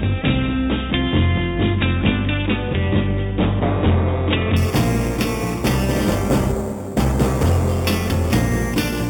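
From 4.57 s to the end, a bright, metallic fizz rides on top of the sound, rising and falling with its level, and its lowest band moves against the pitch. This is imaging from sample-and-hold upsampling: each sample was simply repeated to reach the higher rate, with no smoothing filter, so mirrored copies of the spectrum survive. The first image sits between 4 and 8 kHz, about 18 dB below the signal, which fits an original rate of 8 kHz.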